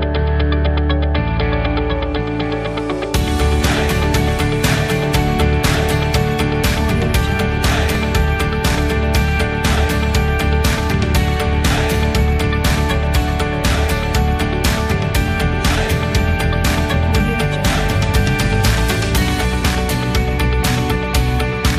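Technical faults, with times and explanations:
0.0–6.64 s, doubled audio track: a second full-band copy of the sound trails the original by about a second, roughly 5 dB quieter, with no decay or room colour. It's already running at the start and drops out abruptly at 6.64 s, likely from a slower second capture path or an out-of-step edit.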